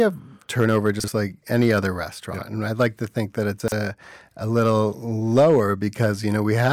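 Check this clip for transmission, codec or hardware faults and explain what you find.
Two kinds of fault affect this speech: repeated hard clipping and two spots where chunks play out of order.

Hard clipping: Some stage in the chain received more level than it could pass, so speech peaks were sliced flat. The overload was about 2 to 5 dB, at 0.60–0.89 s, 1.53–1.79 s, 2.81–2.87 s (just before "to think that"), 4.56–4.78 s, 5.36–5.60 s, 6.03–6.06 s and 6.60–6.72 s. The flattened tops add high harmonics, heard as a rasp or crackle on the loudest syllables, harshest around 5.4 s and at the very end.

Chunks out of order: 40 ms blocks of audio were delivered or written late and played after material that should have followed them. At 1.00–1.08 s a block lands one position late. At 3.60–3.72 s, just after "to think that", a block lands two positions late. No audio is missing, but the sequence is scrambled and each misplaced block leaves hard joins. 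These are heard as brief jumbled moments.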